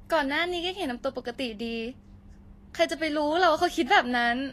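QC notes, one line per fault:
throughout Vorbis compression: likely low-bitrate Vorbis coding, fitting roughly 34 kbps, turns treble detail into hiss; the speech sounds grainy and stops at 14.2 kHz.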